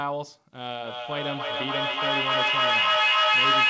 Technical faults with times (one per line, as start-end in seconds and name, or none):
0.84-3.69 feedback echo between two devices